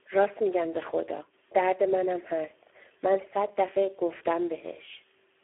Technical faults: Speex codec

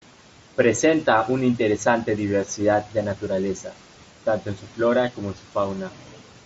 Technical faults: none

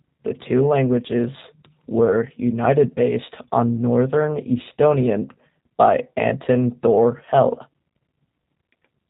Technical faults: G.729 codec

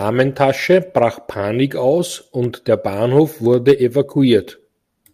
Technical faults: clock drift buffer slips

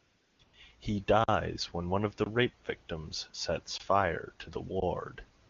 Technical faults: AMR comfort noise; underrun with held sample

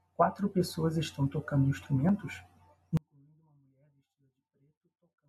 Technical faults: one channel inverted

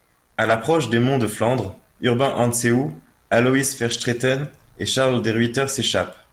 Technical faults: lost packet rebuilt from error correction

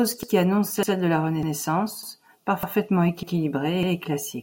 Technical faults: overlapping chunks

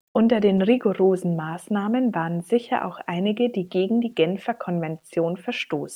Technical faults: low bit depth without dither

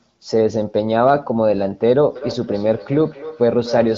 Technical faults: feedback echo between two devices

